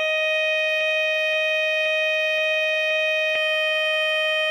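From the first moment to the end, the music has a watery, swirling quality, with metallic chirps on the cymbals and softened attacks, and nothing is heard above about 15.4 kHz. This is MP3 compression damage, plainly audible here. The encoder was likely starved of bits, which fits a low rate around 48 kbps, so it cut the treble at a fixed point and let weak frequency lines flicker on and off between frames.

At 0.81 s the music catches on itself: a piece about 0.52 s long plays five times back to back, exactly the same each pass, until 3.35 s. This is a broken-record loop. The stream or player likely stalled and kept resending the last fragment it held. Whatever music belonged in those two and a half seconds is gone.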